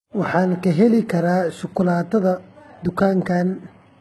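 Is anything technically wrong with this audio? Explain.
Yes. Throughout the speech there is heavy damage, likely from HE-AAC compression at a very low bitrate near 16 kbps. The treble is rebuilt from copied lower bands, so s sounds turn gritty and lispy. A spectrogram shows nothing above 11.8 kHz and smeared, repeated-looking upper bands.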